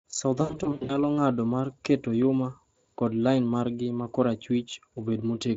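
VoIP packet loss, concealed by the speech codec, hits 0.41 to 1.03 s: speech turns buzzy and fading in gaps up to 100 ms, before "ng’ado mar keto".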